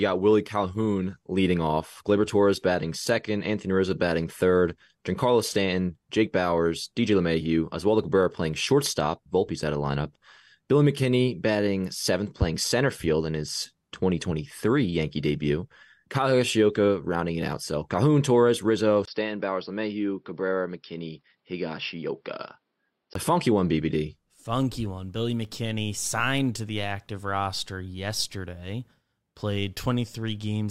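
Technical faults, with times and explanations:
0.0–6.0 s, adaptive stream starting at a low bitrate. The opening sounds thin. The top end is there but artificial, rebuilt from the lower band rather than carried in full. Codec artefacts are stronger. This fits an HE-AAC stream at around 48 kbit/s, chosen so playback could begin quickly. At 6.0 s the quality jumps to full, natural treble with no gap. That points to a switch to AAC-LC at about 96 kbit/s.
19.05–23.15 s, input switched to a poorer device. At 19.05 s, just before "a funky one", there is a 20 ms dropout. Then the sound turns dull and boxy. Nothing reaches above 5.6 kHz. The level falls by about 5 dB. A new noise floor appears, roughly 50 dB below the speech. This is likely a change to another microphone or a headset call profile with a narrower band. At 23.15 s the original tone returns.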